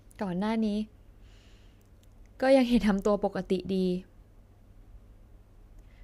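Listening to this speech recording, nothing stood out as a technical problem.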